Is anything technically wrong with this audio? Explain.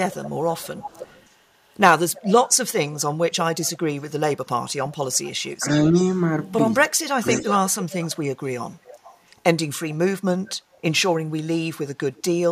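Yes, the recording has two recurring faults.

Echo leak runs from 0.12 to 4.04 s, 5.13 to 6.23 s, 7.22 to 11.12 s and 12.15 to 12.23 s. A copy of the speech returns about 315 to 346 ms late. It sits about 15 dB down at first, rises to about 10 dB down in the third stretch, and drops to about 30 dB down at the end. This is likely a loudspeaker-to-microphone path that the echo canceller left partly uncancelled.

Speech suppressed in double talk occurs from 3.56 to 5.94 s and from 6.88 to 7.25 s, while both sides talk at once. The talker dips by up to about 25 dB in pieces, totalling roughly a second, then about 0.4 s. The likely cause is an echo canceller that could not separate the talker from the echo and attenuated both.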